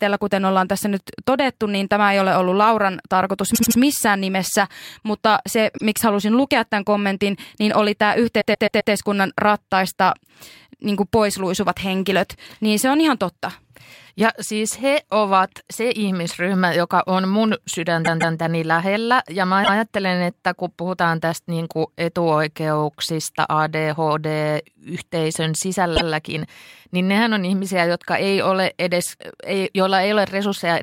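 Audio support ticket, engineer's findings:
Repeated frames, speech, at 3.54, 5.76, 8.40, 18.04, 19.63 and 25.95 s. Blocks of 52 to 157 ms replay 1 to 4 extra times. Exact replays that lengthen the audio, unlike dropouts. Probably frames resent upstream of the decoder.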